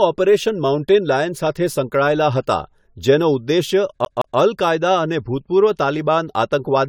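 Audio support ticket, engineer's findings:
Generation loss, throughout: swirly, smeared, hollow speech; consonant attacks blurred; nothing above 19.4 kHz. Likely repeated lossy re-encoding, about five passes, consistent with AAC-LC near 96 kbit/s. Each pass requantises on a shifted frame grid, compounding noise and spectral holes.

CD stuck on one turn, 4.05 to 4.38 s: fast even stutter, same 167 ms segment replayed twice, brief mute at each jump. Disc playback fault: scratch knocking laser back one track per revolution.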